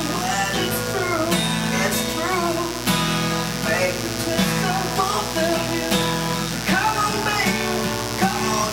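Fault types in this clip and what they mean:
Mains buzz: switching spikes from a dimmer, rectifier or unshielded cable leak in twice per cycle of the 60 Hz supply, so the interference is a dense stack of 60 Hz harmonics climbing into the kilohertz range. Here it runs through the whole clip as a steady, raspy buzz sitting not far below the wanted sound. Unlike plain mains hum, which is a smooth low tone, this has a gritty, bright edge from those upper harmonics.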